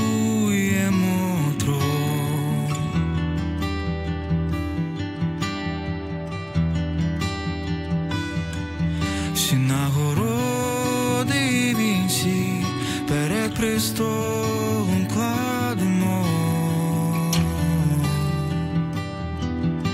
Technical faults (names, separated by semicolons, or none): none